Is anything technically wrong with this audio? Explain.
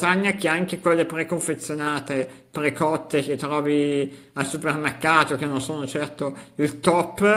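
No technical faults are audible.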